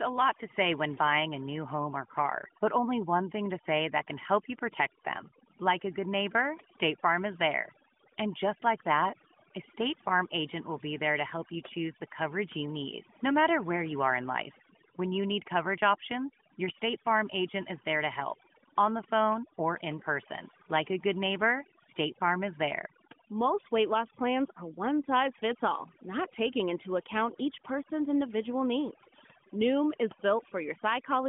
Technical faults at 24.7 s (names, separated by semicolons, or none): overdone noise removal